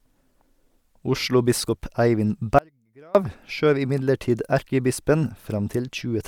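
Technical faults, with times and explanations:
2.59 to 3.15 s, audio dropout to a faint residue: the speech cuts out abruptly for about 0.56 s, leaving only a faint trace roughly 30 dB down, before returning at "skjøv imidlertid erkebispen". The likely cause is a momentary signal loss with the path still live, which is why the onset is sudden rather than a pause or fade, and the gap is not true silence.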